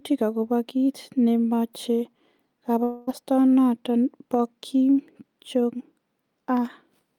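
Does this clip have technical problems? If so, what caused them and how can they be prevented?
Yes: from 2.83 to 3.10 s the speech turns into a fading buzz, likely a long network dropout, where the receiver papers over roughly 0.24 s of lost audio. A steadier connection or a larger jitter buffer would help prevent it.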